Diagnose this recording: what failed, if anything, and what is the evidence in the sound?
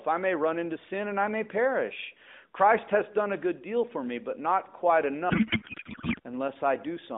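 Codec payload misread from 5.30 to 6.19 s, just after "me but not quite": the speech gives way to garbled noise and warble that barely tracks it. This is a codec-stage failure in how the AMR-NB stream's bits are unpacked. The sound points to octet-aligned frames being parsed as bandwidth-efficient, so the decoder reads valid-looking frames with every field shifted and synthesises nonsense. The narrowband 12.2 kbps AMR line, passing roughly 150 Hz to 3.7 kHz, is audible either side of the fault.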